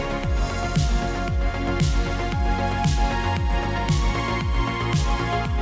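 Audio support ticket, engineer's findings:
Nothing to flag here; the audio came over the call path as expected, with the usual G.722 character and no content above 8 kHz, and nothing else stood out on listening.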